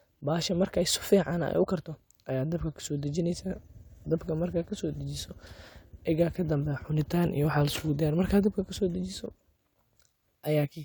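Nothing technically wrong turns up anywhere in this bit of speech, so there's simply nothing to flag.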